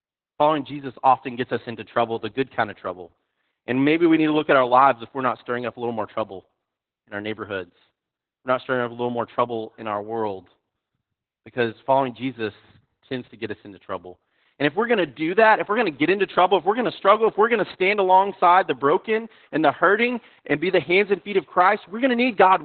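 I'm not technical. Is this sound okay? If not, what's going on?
No. Throughout, the speech sounds muffled, hoarse and slightly robotic, like a bad phone call. That's heavy Opus voice compression, which cut everything above 4.4 kHz.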